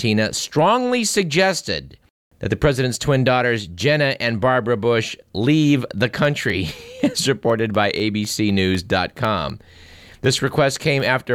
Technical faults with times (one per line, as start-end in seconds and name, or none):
6.25-11.25 periodic USB or driver dropouts